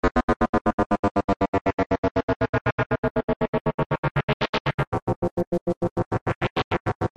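A recording of everyday sounds with a section at the wrong speed: from 4.83 s to the end at 7.16 s, playback drops to 0.839 times the original rate, so everything turns slower and about three semitones deeper at once. The likely cause is that part being fitted to the wrong clock. On a spectrogram, all harmonics and bands shift downward together at 4.83 s; the waveform shows stretched, slower-moving events from that point.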